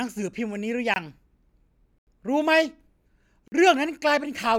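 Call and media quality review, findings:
Block of digital silence, three dropouts in the speech: 0.94 s (21 ms), 1.98 s (85 ms, audible hole), 3.48 s (43 ms). Hard cut to silence and back. Lengths fit 1024-, 4096- and 2048-sample buffers; output buffer likely not filled in time, so look at the render/playback thread.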